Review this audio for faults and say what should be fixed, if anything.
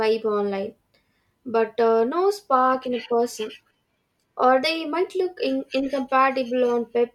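No faults; nothing needs fixing.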